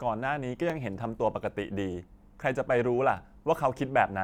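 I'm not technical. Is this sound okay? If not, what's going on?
No. Three times, the playback device ran short of fresh audio and filled the gap by replaying the tiny piece it had just played, a fault called a repeated buffer. Each piece is only about 12 thousandths of a second, so instead of a clear stutter you hear a quick click or buzzy tick in the speech: at 0.70 s, from 1.92 to 1.94 s (played twice extra, so slightly longer), and at 3.17 s. No speech is lost.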